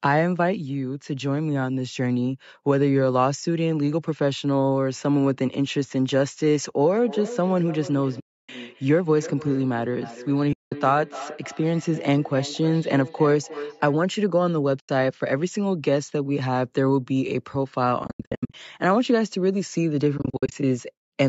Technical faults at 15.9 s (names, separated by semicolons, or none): none